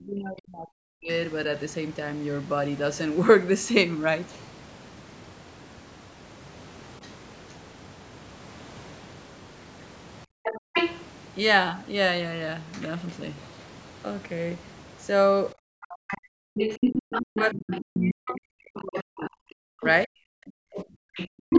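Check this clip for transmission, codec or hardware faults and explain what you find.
Yes, the clip shows echo-cancellation trouble of three kinds, all from a call whose audio stops at 8 kHz.

Speech suppressed in double talk occurs at 0.0–1.09 s, 10.33–10.75 s and 15.53–20.97 s. The talker's level falls by up to about 40 dB, for roughly a second, under half a second and about four seconds in total. The likely cause is an echo canceller that could not separate the near talker from loudspeaker echo while both sides spoke, so it attenuated everything.

The other side's voice leaking through appears as a brief scrap at 7.04–7.08 s, about 30 dB under the talker. Longer stretches follow at 10.43–11.02 s and 16.08–19.51 s, about 5 dB below the talker, and from 20.74 s to the end, about 5 dB above. This is likely residual echo the canceller failed to subtract from the microphone.

Background gated by the echo canceller occurs at 21.28–21.5 s. 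The room sound drops by about 40 dB for roughly 0.2 s, then returns when the canceller releases. This happens during the final loud stretch of leaked far-end sound. The timing separates it from a noise gate or packet loss: the room ambience vanishes only while the loudspeaker signal dominates.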